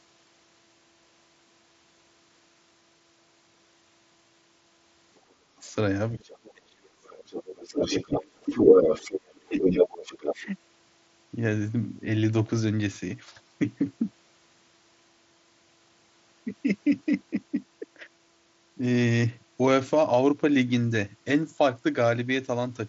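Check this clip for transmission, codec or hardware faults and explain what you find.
Two echo-canceller problems appear in this speech clip, heard through a Bluetooth mSBC headset path whose band stops near 7.7 kHz.

Other side's voice leaking through, 5.16–5.32 s and 6.25–10.35 s: a second voice enters, likely loudspeaker echo the canceller failed to remove. The first scrap sits far below the talker. The long stretch is about as loud as the talker.

Speech suppressed in double talk, 5.41–8.7 s, 9.31–9.74 s and 10.36–10.44 s: with both sides talking, the canceller likely turns the talker down along with the echo. This cuts the level by about 30 dB at worst in the first stretch, about 20 dB in the second and only slightly in the third.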